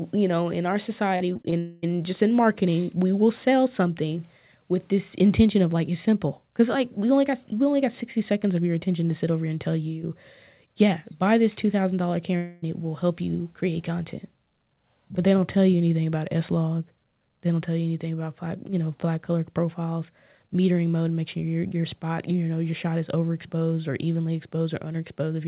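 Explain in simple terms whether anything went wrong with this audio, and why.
Yes, two kinds of network fault can be heard.

From 1.16 to 1.54 s there is repeated packet loss (robotic sound). The audio breaks into five short holes, none longer than 40 ms, and each is patched by briefly repeating the previous sound. That makes the passage choppy and mechanical, with about a quarter of it replaced. What sets it apart from a dropout is the stutter: many tiny gaps in quick succession rather than one long hole.

Right after, from 1.58 to 1.84 s, and again from 12.36 to 12.64 s, the sound is replaced by a single smeared, buzzy continuation lasting about a quarter second each time. The likely cause is a long network dropout, where audio stops arriving for a stretch and the receiver stretches the last sound to cover it. Unlike the choppy stretch, this is one unbroken fill. These gaps are short enough that the fill covers them completely, so no silence is heard. 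The audio that should have been there is gone when the sound resumes.

The call connection itself cuts off everything above 4 kHz, which gives the whole clip a muffled, telephone-like tone.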